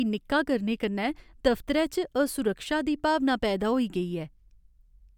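No technical faults are audible anywhere in the recording.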